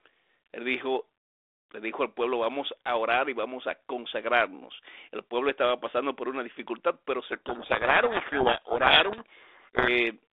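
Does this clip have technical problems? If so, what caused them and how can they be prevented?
Yes. From 7.32 to 9.89 s there is a codec payload misread: the sender and receiver disagree on how the G.726 code words are packed, which fits a bit-order mismatch, so the decoder applies the right codec to scrambled values. The speech there is buried under harsh, grinding distortion. Preventing it means having both ends negotiate and confirm the same G.726 packing convention before the call starts.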